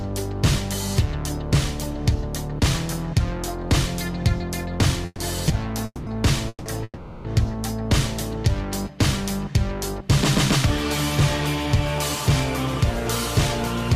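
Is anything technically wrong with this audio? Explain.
Yes. Four call audio freezes cluster between 5.06 and 7.28 s: at 5.06–5.22, 5.86–6.10, 6.49–6.69 and 6.84–7.28 s. Each time the sound stalls into a fading buzz, then a brief silence, before resuming where it left off, each stall pushing the audio later. The likely cause is delayed packets draining the jitter buffer. On a spectrogram each appears as smeared, steady bands thinning to a short blank strip, and on the waveform as a decaying tail.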